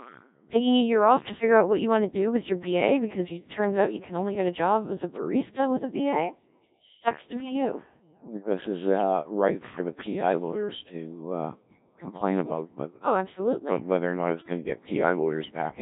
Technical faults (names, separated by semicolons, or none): Codec 2 vocoder; bit errors on digital voice radio